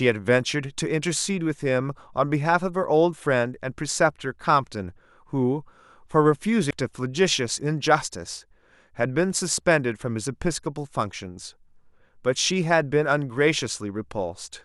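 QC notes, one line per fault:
6.70 s, stream segment skipped. The speech jumps abruptly forward at this point, with a brief blip at the join. Whatever should have followed is simply absent, and the next part picks up as if nothing were missing. The break is sharp and does not fade. The likely cause is a segment of the stream failing to load, with the player moving straight on to the next one and losing a chunk of the programme.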